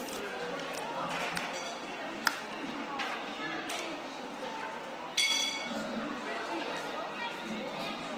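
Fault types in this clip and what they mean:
Opus compression: Tonal parts turn grainy, rough and noisy throughout, plainly audible, while content still extends to about 20.1 kHz. This is likely Opus in its CELT mode at a low bitrate near 16 kbps, filling starved bands with folded or noise energy.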